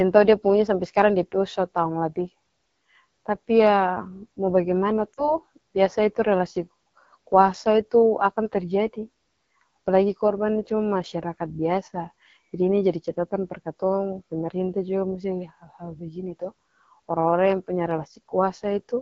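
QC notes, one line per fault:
throughout: AMR wideband (HD Voice) codec. The speech sounds rough and raspy. That points to a low rate, near 8.85 kbit/s. Detail above 6.4 kHz is only shaped noise.
5.14 to 5.34 s: lost AMR speech frames. About 40 ms of speech drops out, which fits two lost frames. The decoder repeats old settings with falling gain, so sound fades toward near silence, then returns rough.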